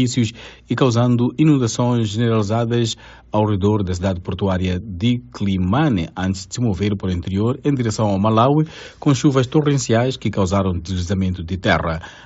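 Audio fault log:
2.92 s, concealed Bluetooth headset packet loss: a gap of about 7.5 ms, which fits a single lost headset frame, was filled by the receiver repeating the best-matching stretch of the preceding waveform, so there is no silence and no click, and the loss is barely noticeable in the otherwise continuous mSBC wideband sound. A plain dropout would leave a hole or a click, and a longer run of losses would turn buzzy and tonal. This one stays nearly hidden.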